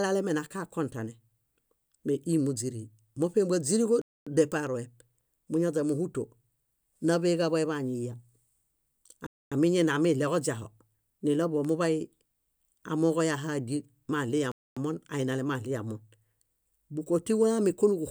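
At 4.02 s the speech drops into a gap between chunks: a quarter-second hole, 250 ms long, that ends at 4.27 s. It recurs at 9.27 to 9.52 s and 14.52 to 14.77 s, spaced about 5 s apart, which points to audio delivered in 5-second chunks with dead time inserted at each join. Unlike a dropout from damaged data, these holes fall on a fixed grid.

From 4.67 to 5.39 s there are CD scratch ticks: five tiny clicks, the longest around a millisecond, at roughly seven per second. A blemish on the disc defeats error correction once per revolution, and the player patches or mutes the damaged samples. A second run of three ticks at 11.28 to 11.65 s comes slightly faster. These are brief clicks rather than silences, and their rapid, rotation-locked rhythm separates them from the chunk gaps.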